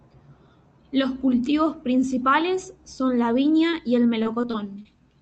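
At 3.71 to 3.75 s, right after "principales son la", there is short concealed packet loss. Roughly 20 ms of audio arrived too late to decode, and the receiver bridged it by extending the preceding sound, leaving a brief smear before "y el" resumes.

From 4.23 to 4.87 s, just after "y el", the span shows repeated packet loss with robotic sound. Several successive gaps, the longest 22 ms, add up to about 80 ms missing. Each was patched by extrapolation, so about 12% of the stretch is synthetic, giving a choppy texture.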